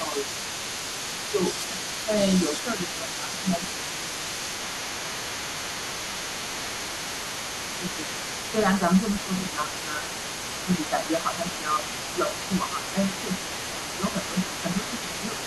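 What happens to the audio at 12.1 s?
At 12.1 s you're inside a stretch of speech suppressed in double talk, running from 10.9 to 12.95 s. Both ends seem to be talking at once there, and the echo canceller likely couldn't tell the near talker apart from the loudspeaker echo, so it pulled everything down together. The talker's voice dips by a few dB in patches adding up to around half a second across that span, sounding briefly muffled or pushed back.

Under that, the other side's voice is leaking through for the whole clip, sitting roughly 10 dB below the main talker. It's most likely the other side playing on the talker's own loudspeaker that the canceller never fully removed from the mic. Around 12.1 s it's competing with the dipped speech.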